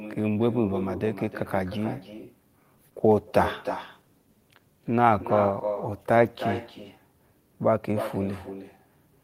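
From the start of the clip to its end, every phrase of speech is followed by a fainter duplicate, an echo with no canceller. The far end is evidently playing the call through a loudspeaker, and its microphone is sending that playback straight back without any echo cancellation. The copy trails the original by roughly a third of a second and sits about 10 dB below it, with a thinner colour.

At 2.77 s a call bitrate drop sets in and lasts until 7.91 s. The bandwidth estimate fell, and the encoder was forced down to a much lower rate. The sound points to a fall from around 48 kbps to around 18 kbps. At that rate the codec quantises coarsely and trims the upper frequencies, so the speech turns muffled and watery. The worst stretch holds for about 3.1 s before the quality climbs back.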